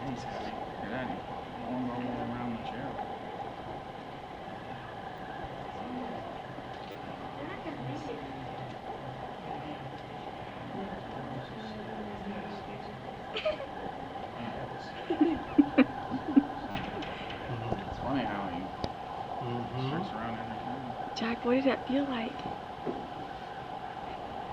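Brief buzzing stutters at 5.17 s, from 6.92 to 6.95 s and from 16.71 to 16.75 s are repeated buffers: late audio made the device replay its last 10 ms chunk.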